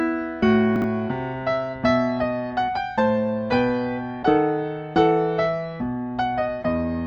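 Between 0.76 and 0.84 s the music has chunks out of order: one 20 ms chunk plays three chunks late, after the material that should follow it. Nothing is missing, but the reshuffled 80 ms sounds jumbled, with three hard joins. On a waveform and spectrogram these show as abrupt discontinuities and thin vertical broadband lines.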